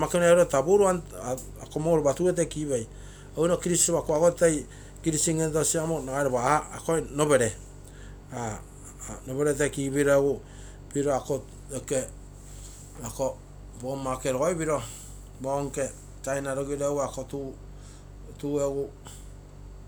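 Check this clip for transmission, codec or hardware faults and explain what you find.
Nothing stood out on listening to this speech recording.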